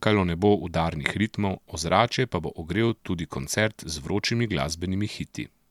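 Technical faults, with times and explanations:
No technical faults can be heard in this speech recording.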